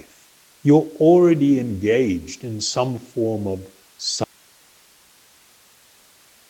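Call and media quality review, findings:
Audio dropout to a faint residue, 4.24 s to end: abrupt cut to hiss about 35 dB down, likely the source stalling while the downstream path stayed live.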